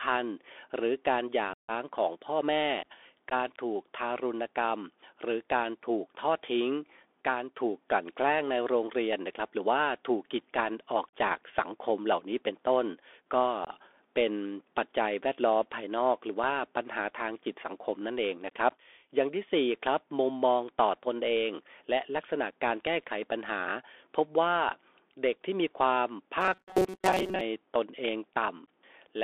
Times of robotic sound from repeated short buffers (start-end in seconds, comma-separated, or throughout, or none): 26.41-27.41